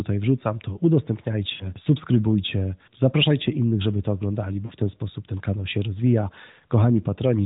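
At 1.54–1.73 s and 4.66–4.73 s, lost AMR speech frames: the decoder repeats the last pitch at falling gain. This shows as smeared, fading harmonics and a tapering waveform.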